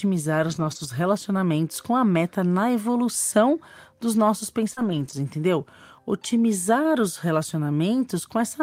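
A speech clip with lost packet rebuilt from error correction in two places: packets dropped, and the decoder played the low-bitrate copies carried in the following packets, so there is no gap but the audio turns rougher and noisier from 0.43 to 0.85 s, just before "relacionamentos com a meta", and again from 4.77 to 5.11 s. Right after "na evolução dos nossos", a short concealed packet loss at 4.73 to 4.79 s, with about 40 ms never arriving, left the receiver extending the preceding sound, heard as a brief smear into that second rebuilt stretch.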